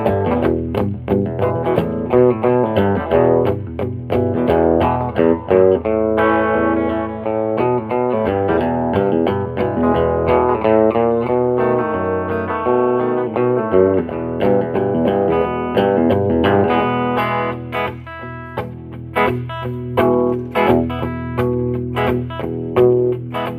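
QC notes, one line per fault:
No faults were found on listening to this clip, and no event stands out anywhere in the audio.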